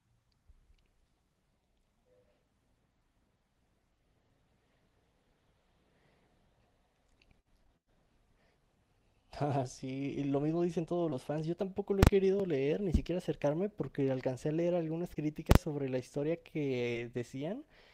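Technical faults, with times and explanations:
7.63 s to 7.70 s, 11.10 s, 15.14 s to 15.27 s, 16.93 s: short concealed packet loss. Each gap is about 20 ms, which fits lost 20 ms packets. The decoder filled 10 to 18 ms by extending the last sound, then blended back. This gives brief smears or wobbles, with a little added delay at 11.10 s and 15.14 s.
12.03 s to 12.07 s, 15.51 s to 15.55 s: invalid numbers at full scale. A calculation produced infinite or invalid values. They were clamped to the maximum level for a 40 ms block. The output jumps to one extreme value, far beyond the speech peaks, and back, so each block is heard as a sharp, very loud bang.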